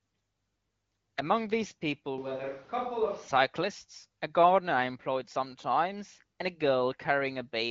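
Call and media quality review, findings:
Switch to a distant microphone, 2.18 to 3.28 s: close-mic feed likely dropped, capture falls back to a far pickup. Speech turns abruptly roomy and hollow, thinner in the bass, about 5 dB quieter, room noise rising to roughly 25 dB below the speech. Hard cut in and hard cut back. AMR wideband (HD Voice) band limit near 7 kHz throughout, with faint or no codec damage, consistent with a higher AMR-WB rate around 18 kbit/s.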